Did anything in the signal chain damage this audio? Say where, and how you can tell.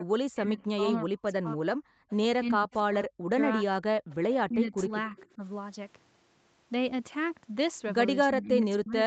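Yes, and it's the echo canceller in the call processing that's doing the damage. Its most obvious handiwork is speech suppressed in double talk at 0.0 to 1.62 s, 2.44 to 3.8 s, 4.48 to 5.42 s and 8.29 s to the end. The voice dips or drops out in chunks, by as much as about 40 dB in the first two stretches and roughly 15 to 20 dB later. Likely cause: the far end was talking, and the canceller couldn't separate this talker from the loudspeaker echo, so it ducked both.

Between those, at 1.9 to 2.09 s, the background is gated by the echo canceller. For about a fifth of a second the room tone falls away, by about 40 dB, then comes straight back. That's the canceller clamping down on the mic while the loudspeaker was active and releasing once it decided things were clear. It's short.

There's also echo leak at 4.1 to 4.35 s, 4.78 to 4.82 s and 5.16 to 5.27 s. These are faint, scrappy copies of the voice, about 25 dB under the direct speech and trailing it by 288 ms. 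The constant delay gives it away as a returned loudspeaker signal. The likely cause is that the canceller failed to fully subtract what the mic picked up from the speaker, so fragments got sent back. The last two land inside the 4.48 to 5.42 s suppression.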